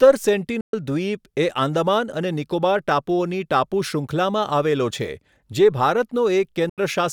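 Speech with two short holes where the sound drops to silence, from 0.61 to 0.73 s (about 120 ms lost) and from 6.69 to 6.78 s (about 80 ms lost). These are most likely Bluetooth dropouts, where packets failed to reach the headphones in time. The speech resumes further along after each gap, as if it had kept playing. That sets them apart from a stall or buffer underrun, where playback pauses and then picks up where it stopped.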